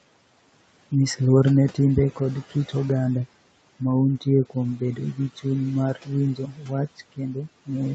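Three stretches of speech go faint and swallowed: from 4.78 to 5.19 s, just before "chuny mar", with a dip of about 10 dB; from 6.36 to 6.71 s, right after "chuny mar", sinking about 13 dB; and from 6.98 to 7.48 s, dropping about 16 dB. This is speech cut by the noise suppressor, which mistook soft parts of the speech for the room noise beneath them and turned those moments down along with it.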